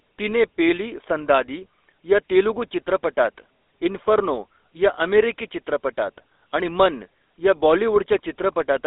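From the very start and all the way through, this speech has been through a GSM full-rate codec, and the damage is plainly audible. Everything sits in a narrow phone band from about 300 Hz to 3.7 kHz, so it sounds thin and boxy. The codec rebuilds the voice from a vocal-tract model fed by sparse, regularly spaced pulses, which leaves that buzzy, gravelly roughness. The whole character fits the old 13 kbps mobile codec.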